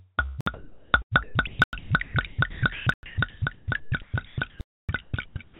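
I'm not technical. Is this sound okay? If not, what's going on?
No, there are two problems. From about 0.26 s right to the end, the sound keeps chopping in and out. That's likely sound chopped by the voice detector, which kept switching transmission off and pasting in comfort noise.

On top of that, there are four blocks of digital silence, where the audio drops to dead nothing: a short hole at 0.41 s (58 ms), two at 1.64 s and 2.94 s (about 93 ms each), and a longer gap from 4.61 to 4.89 s. The program probably didn't deliver audio in time, so the gaps were left empty. The muffled, phone-like quality, with nothing above 4 kHz, comes from the call line itself and isn't a fault.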